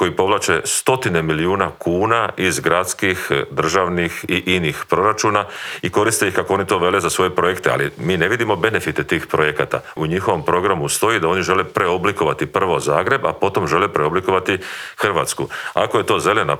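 No technical faults can be heard anywhere in this recording. The audio runs without any break, glitch or disturbance that would point to a problem in how it was captured or delivered.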